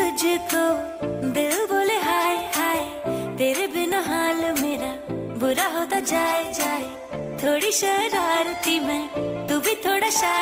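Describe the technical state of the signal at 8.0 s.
At 8.0 s the audio is inside a stretch of adaptive stream playback at a lower bitrate, which runs from 3.68 s to the end of the clip. The stream has switched abruptly, with no gap, to a cheaper encoding whose rising codec artefacts fit a fall from about 64 kbit/s to 24 kbit/s Opus. On a spectrogram the upper band is cut back or patchy from 3.68 s onward, while the waveform shows no break at the switch.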